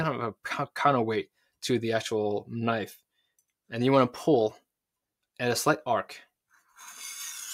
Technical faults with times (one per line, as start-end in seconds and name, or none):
none